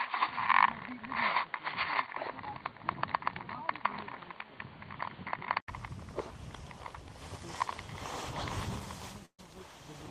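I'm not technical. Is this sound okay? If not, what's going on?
No. From the start until 5.68 s, the recording likely came through a poorer microphone, an input switched to a poorer device. That device passes nothing above 4.6 kHz, so the sound is dull and boxy, with a faint extra hiss. At 5.68 s there is a short gap of about 80 ms, then it clears up.

At 9.25 to 9.40 s there is a burst of packet loss: a chunk of the audio never arrived in time. The receiver stretched the last sound for about 130 ms, fading it, then left a brief silence. About 140 ms of the real sound is missing before playback continues.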